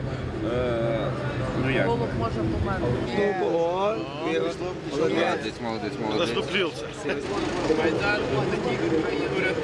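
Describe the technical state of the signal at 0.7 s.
At 0.7 s the signal is intact, with nothing to point to as a fault at that moment.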